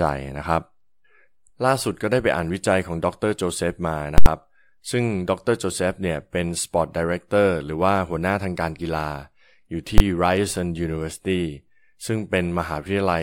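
At 4.18 to 4.26 s and again at 9.98 to 10.0 s the speech is hit by invalid numbers at full scale: infinite values were clamped to maximum. The 80 ms block gives loud pops at each edge with silence between; the 20 ms block is one bang.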